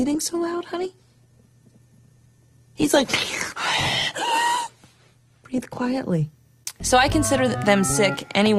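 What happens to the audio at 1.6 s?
Dull and smeared, with nothing above 12.2 kHz and strong codec artefacts until 6.0 s. This is an adaptive stream starting at a low bitrate, which fits about 16 kbit/s, before stepping up.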